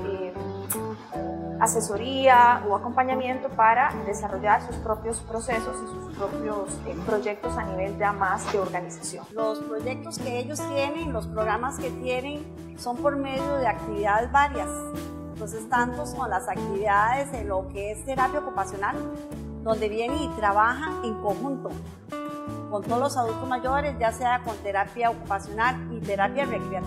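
No technical faults can be heard anywhere in this recording.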